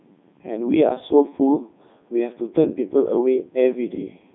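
Throughout, Codec 2 vocoder resynthesis rebuilds the speech from sine waves, fitting its 3.2 kbit/s mode. It sounds buzzy and robotic, and the spectrogram shows nothing above 3.9 kHz.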